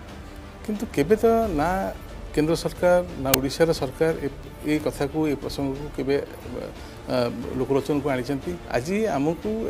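The audio carries one uninitialised buffer fault at 3.34 s: a single loud crack lasting about 5 ms. It occurs because one output block was played before audio was written into it, so stale memory contents were heard as samples.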